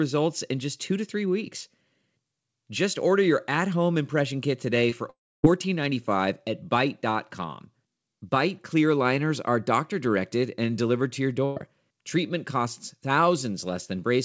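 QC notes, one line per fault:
4.90 s, short concealed packet loss: about 20 ms never arrived in time, so the decoder extended the preceding sound, leaving a brief smear or wobble.
5.10–5.45 s, long network dropout: audio likely stopped arriving for about 340 ms; the concealed tail fades within about 60 ms into roughly 270 ms of silence, then speech resumes further on.
11.45–11.58 s, burst of packet loss: about 120 ms of consecutive audio was lost, so the last sound is held and faded as a buzz or hiss before speech continues past the gap.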